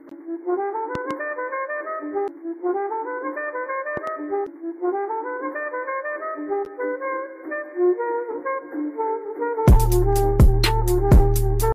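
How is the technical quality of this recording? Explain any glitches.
The recording is marred by two loud pop faults, at 0.95 to 1.13 s and at 3.97 to 4.10 s, each a pair of sharp thumps peaking about 10 dB above the sound. A voltage pulse, likely from a plug, switch or static discharge, was added to the signal, and the sound continues underneath. Unlike a dropout or digital click, nothing is removed.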